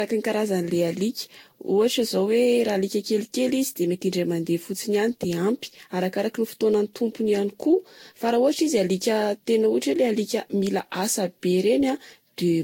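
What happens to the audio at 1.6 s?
At 1.6 s, as throughout, the speech sounds swirly, hollow and smeared, with blurred attacks and nothing above 16.6 kHz. This is likely generation loss from about seven lossy re-encodings.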